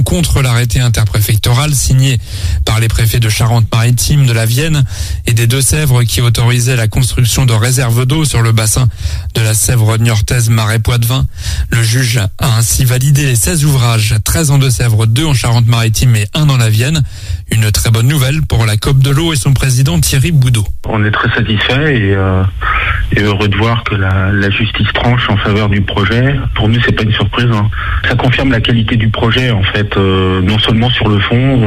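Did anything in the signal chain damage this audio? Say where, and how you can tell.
Yes. The damage sits at the driver or buffer stage, where two devices running on independent clocks likely drifted apart by a few hundred parts per million. The buffer between them slowly filled or drained until a small block of samples, on the order of fifteen, was dropped or repeated. That is clock drift buffer slips, heard as a regular click every 0.834 s from 0.76 s to 31.61 s, around forty in all, whenever signal is present.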